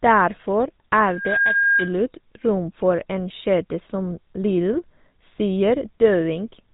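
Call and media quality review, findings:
GSM full-rate codec, throughout. Plainly audible buzzy, gravelly roughness on speech, nothing above 3.8 kHz; pulse-driven vocal-tract model, consistent with 13 kbps full-rate coding.

Loudspeaker feedback squeal, 1.04–1.98 s, ending just before "rom for en kjede". Mic–speaker loop: 1.6 kHz tone builds over about 0.3 s, peaking around 5 dB above the speech.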